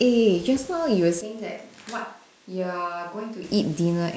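At 1.21 s the speech abruptly turns hollow and roomy, about 10 dB quieter. It is likely a switch to a distant microphone, lasting until 3.43 s.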